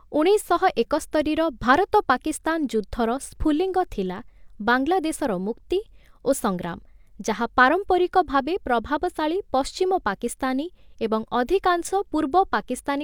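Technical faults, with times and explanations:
No technical faults detected in the speech recording.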